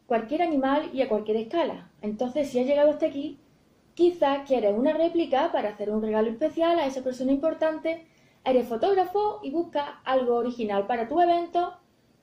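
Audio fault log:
No technical faults are audible anywhere in the clip; the signal holds steady throughout.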